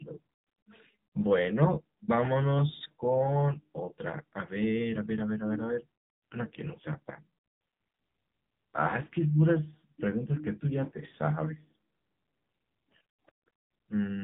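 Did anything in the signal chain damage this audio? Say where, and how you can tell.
Yes, at the codec stage: AMR narrowband mobile coding runs the whole length. Nothing survives above 3.8 kHz, and the speech is heavily buzzy and synthetic, which fits a low mode of around 6.7 kbps, where too few pulses drive the vocal-tract model.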